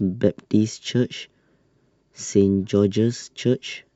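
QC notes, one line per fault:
No faults heard.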